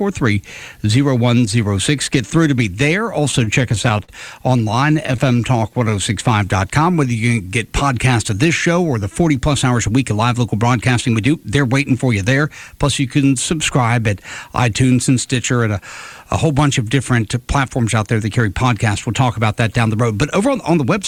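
Repeated stalls (stutter) occur from 3.31 to 4.10 s and again from 4.58 to 5.76 s. Packets arrived late, so the jitter buffer kept running dry, and the receiver stretched the last sound across each wait instead of dropping anything. The first stretch has eight such gaps totalling 128 ms, about 16% of the span, the longest at 55 ms. The second has ten shorter gaps totalling 96 ms, none over 17 ms. The audio catches and drags in small hiccups.

A jitter buffer slow-down follows from 5.34 to 7.29 s, overlapping the end of the second stutter. With its reserve depleted, the receiver rebuilt it by repeating single pitch periods and fragments of pauses, adding 186 ms in total. Playback runs at 91% of normal speed with the pitch unchanged, so sounds are drawn out.

A jitter buffer speed-up runs from 9.22 to 11.39 s, and another from 20.41 to 21.00 s. Here the buffer had accumulated more audio than its target, so the receiver trimmed short pieces a pitch period or so long, repeatedly, to pull the delay back down. 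The first pass plays at 107% and sheds roughly 150 ms. The second plays at 108% and sheds about 50 ms. Pitch holds steady while the sound comes across as hurried.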